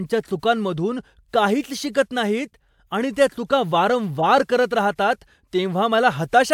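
At 1.60 to 1.64 s and again at 4.18 to 4.24 s the speech is interrupted by short bursts typical of a corrupt frame decoded: bit errors in the compressed data were played back rather than concealed, so misread gains and codes put energy at the wrong frequencies. The first peaks around -25 dBFS and spans what sounds like a couple of frames. The second is louder, near -15 dBFS, consistent with a single damaged frame.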